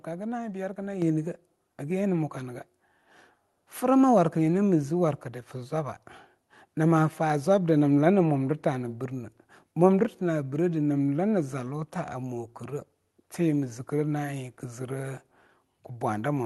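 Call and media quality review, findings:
Abrupt level jump at 1.02 s, speech and background noise louder together by about 6 dB and holding. Microphone volume stepped up: input gain raised by the call software's level control in a single step, not a gradual ramp. Band limit near 12 kHz from the call path, consistent with Opus at around 40 kbps.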